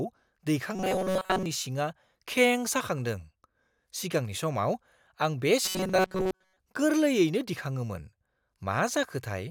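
From 0.75 to 1.46 s, and again from 5.65 to 6.57 s, the speech collapses into robotic sound from repeated short buffers: a rigid, metallic buzz fixed at 188 Hz that still loosely tracks the syllables. The likely cause is audio arriving too late, so a fragment of about 5.3 ms is looped in place of most of the real signal. Unlike plain dropouts there is no silence, and the steady imposed pitch sets it apart from ordinary crackle.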